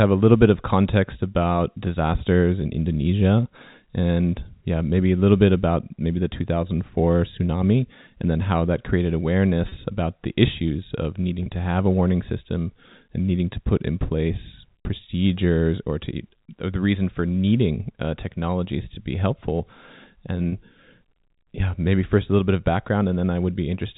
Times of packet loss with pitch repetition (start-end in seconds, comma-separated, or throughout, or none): 9.69-9.72, 11.43-11.46, 14.84, 20.49-20.52